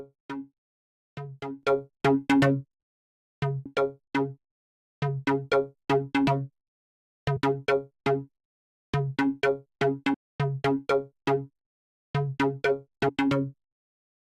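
Brief chirps or squawks break into the sound at 3.65 s, from 7.36 to 7.38 s, at 10.13 s, and from 13.08 to 13.10 s. Each lasts about 20 ms or less. These are signs of damaged data in a compressed stream. A few bytes of the encoded file were lost or corrupted, so the decoder misread those frames, lost its place, and produced a short burst of garbage until it found the next valid frame header.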